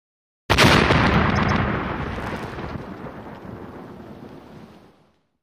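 From 1.35 to 1.61 s there are repeated frames: a block of about 131 ms plays twice more than it should, which fits a short run of compressed frames being resent. It is heard as a stutter, and it lengthens the audio by 261 ms.

Between 2.15 and 2.52 s, processor overload crackle sets in. Buffers miss their deadlines in quick succession, each leaving a hard-edged gap of silence. The spacing points to buffers of roughly 3 ms, with around twenty missed, producing a gritty crackle across that stretch.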